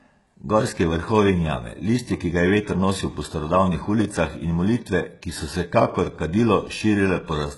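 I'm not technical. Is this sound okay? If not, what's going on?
No. The speech was likely squeezed hard by HE-AAC compression, which keeps only the lower sounds and rebuilds the treble by copying them upward. Throughout, nothing is left above about 11.5 kHz, and s sounds come out gritty, metallic or lispy.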